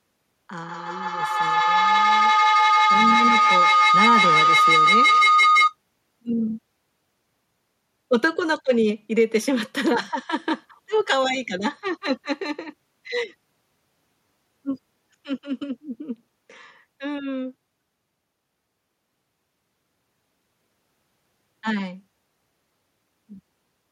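A speech recording with a feedback howl from 0.6 to 5.77 s, where a loudspeaker's output is picked up again by a microphone in the same room and the loop adds gain on each pass. The tone narrows to around 1.5 kHz, peaks about 5 dB above the speech, and repeats roughly every 150 ms, the loop's round-trip delay. On a spectrogram it shows as a bright horizontal band. The waveform swells into a dense envelope.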